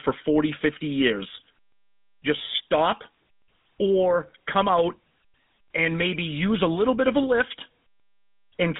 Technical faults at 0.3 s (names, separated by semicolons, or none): GSM full-rate codec